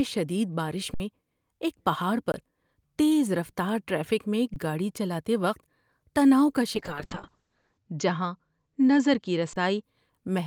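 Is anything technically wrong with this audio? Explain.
Yes. The speech has two kinds of fault.

Underrun with held sample at 0.94–1.00 s, 2.32–2.34 s, 4.54–4.56 s (just before "گاڑی چلاتے") and 9.53–9.56 s. The output buffer ran dry, so the converter froze on its last value. The sound stops flat. Roughly 70 ms, 20 ms, 20 ms and 30 ms of live audio went missing.

Call bitrate drop from 6.76 to 9.89 s, right after "تناؤ کا". The bandwidth estimate fell and the encoder went from 32 to 7 kbps, bottoming out for about 1.03 s. It also narrowed the band from 20 kHz to 8 kHz. The speech turns muffled and coarse.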